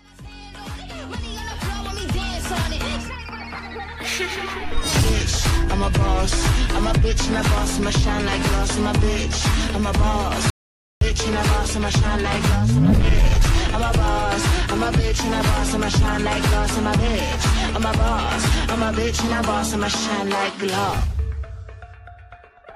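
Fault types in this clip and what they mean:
Audio dropout to silence: at 10.5 s the sound cuts out mid-flow and leaves dead silence, no room tone at all, for about half a second until 11.01 s. That's likely the input briefly disconnecting or muting while recording carried on.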